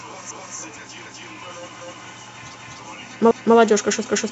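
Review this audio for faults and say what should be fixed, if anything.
Overlapping chunks: each 0.5 s chunk begins 250 ms before the previous one ends, so speech stutters at 0.31–0.56, 1.06–1.31, 1.81–2.06, 2.56–2.81, 3.31–3.56 and 4.06–4.31 s. To fix it, advance each chunk by its full length, or crossfade and trim the overlap so the shared 250 ms plays only once.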